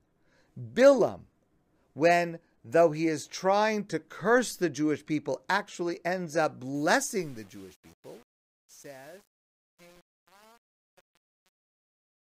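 From about 6.75 s to the end at 12.24 s, the speech fade-out picks up truncation distortion. The level stage is chopping samples to very few bits with no dither, which fits an 8-bit path. By 6.99 s the tail gets gritty as it fades.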